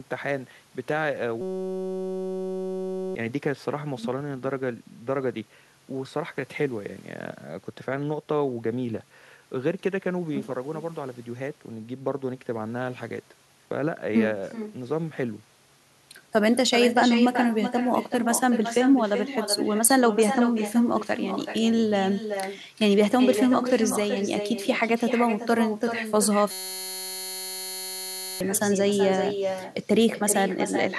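Echo with no canceller runs through the whole recording. The far end is playing the call on a loudspeaker, and its microphone picks that playback up with nothing removing it, so the speech returns after the network round trip. Every phrase is trailed about 0.4 s later by a copy sitting roughly 8 dB below the original, thinner, smearing the speech throughout.

A system hang loop occurs from 1.41 to 3.15 s and again from 26.51 to 28.41 s. In each case the machine or its driver stalled while the sound hardware kept cycling the same tiny ring buffer. A 5.33 ms slice repeats over and over, which fits a 256-sample buffer. At 188 Hz it fuses into a steady buzz, and about two seconds of real audio are lost each time.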